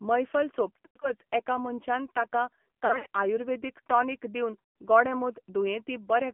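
Throughout, the speech passes through the AMR narrowband mobile codec, which models the vocal tract from sparse pulses at a low bit budget, consistent with the 7.4 kbps mode. Everything outside about 150 Hz to 3.4 kHz is missing, and the voice sounds plainly buzzy and synthetic.

Lost AMR speech frames follow. From 0.86 to 1.11 s, failed frames scattered over 160 ms, with one 100 ms run, force the decoder to repeat its last pitch and vocal-tract settings at falling gain. The sound drags and fades before returning rough. From 2.86 to 3.07 s, shorter losses spread over 200 ms, none longer than 40 ms, give brief dips and warbles. At 4.61 s the longest loss, about 160 ms and consistent with eight consecutive frames, smears the sound out and fades it toward silence.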